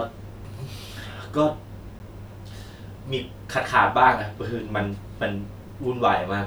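A speech recording with a CD skip at 1.99 s: the player's laser lost its track and landed on a different turn of the disc's spiral, muting for a very brief moment, about 10 ms. That leaves a small tick, after which the speech resumes from a different point.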